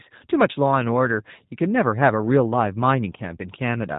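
Speech, run through the G.729 codec the whole way: everything above about 3.8 kHz is gone, and the voice has that plainly audible rough, slightly synthetic edge you get when speech is rebuilt from a filter model and a few pulses per frame, which fits an 8 kbit/s VoIP path.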